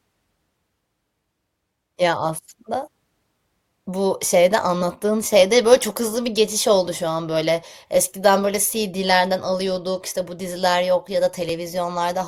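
Overlap between stream segments at 11.5 s, just after "bu diziler yok ya": two segments' timestamps overlapped, so the player trimmed about 16 ms of speech that was never actually duplicated. The waveform jumps across the gap, producing a tiny skip in the speech.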